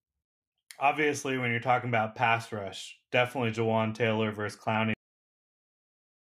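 A speech recording with a cut-off end: at 4.94 s the audio stops mid-sound and drops straight to digital silence, which lasts about 1.3 s to the end of the file. The final buffers were never written out, so the signal ends abruptly instead of trailing off. Unlike a natural pause or a fade-out, there is no decay, no room tail and no gradual drop in level, only an instant cut from sound to nothing.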